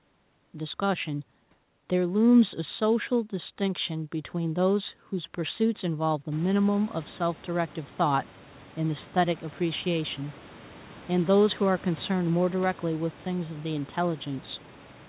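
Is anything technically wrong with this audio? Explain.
No, nothing's actually wrong here: the background noise of the room jumps up by about 19 dB at around six and a half seconds but still sits roughly 25 dB under the speech, and the lack of anything above 4 kHz is just the narrowband call link doing its thing, which fits a 64 kbps G.711 A-law connection.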